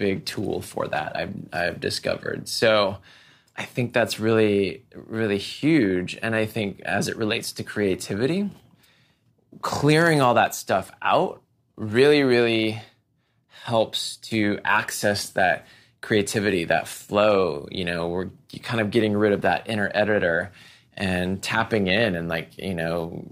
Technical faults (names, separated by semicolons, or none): none